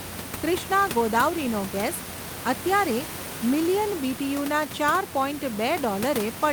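Speech recording with no technical faults; the room's background noise, about 10 dB below the speech, belongs to the recorded environment rather than the system.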